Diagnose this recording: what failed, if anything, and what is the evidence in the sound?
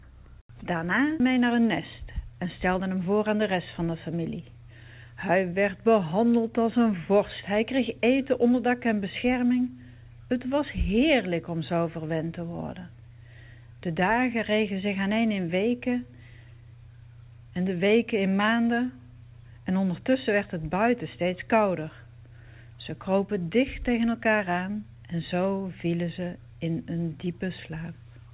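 Skip ahead in the network or jitter buffer at 1.20–1.22 s: about a second of audio vanishes and playback joins the two sides almost directly. Unlike a dropout, no silence fills the gap.

Jitter buffer speed-up, also at the network or jitter buffer stage, at 1.30–1.60 s (113 %) and 2.03–3.83 s (105 %): the buffer trims pitch periods so the sound hurries. Pitch holds steady, which rules out a clock or resampling error.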